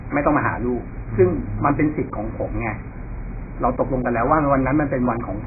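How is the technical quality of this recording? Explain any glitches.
Poor: heavy codec damage runs through the whole speech clip. It sounds like AAC compression, likely AAC-LC at a very low rate, consistent with about 12 kbps. The encoder quantises coarsely, so nothing survives above 2.5 kHz and the remaining bands turn dull, smeared and warbling. Unlike a plain low-pass filter, it leaves a fizzy, watery texture on sibilants.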